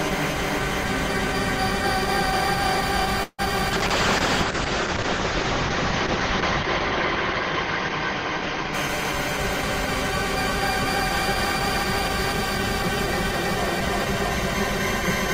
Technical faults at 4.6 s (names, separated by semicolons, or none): call bitrate drop